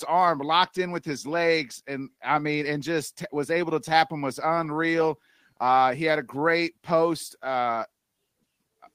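Speech recording with no technical faults to report.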